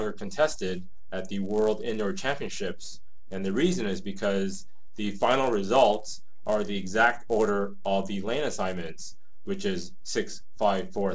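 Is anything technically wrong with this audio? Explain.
Yes. Throughout the clip a steady 100 Hz buzz rides on the sound wherever there is signal. It comes from a resampler restarted on every block: each 10 ms block was converted on its own, which fits a 44.1 kHz to 16 kHz conversion, leaving a small error at every block edge.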